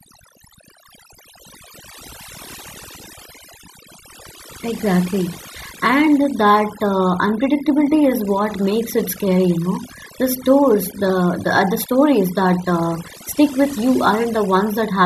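Overdone noise removal runs through the whole speech clip. A noise reduction stage was set too aggressively. It pulls individual frequency bands down whenever they sit near its noise estimate. Quiet speech detail vanishes too. Pauses sound nearly silent with twinkling specks.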